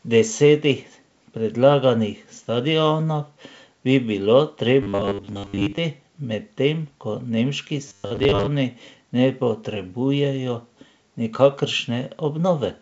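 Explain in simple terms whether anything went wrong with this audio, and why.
Robotic sound from repeated short buffers appears from 4.83 to 5.80 s and again from 7.88 to 8.47 s. The speech turns into a stiff, metallic buzz at a fixed 100 Hz pitch, which fits the software replaying the same 10 ms slice over and over. This likely happens because new audio arrived too slowly and the gaps were filled with copies, covering most of the first stretch and about half of the second.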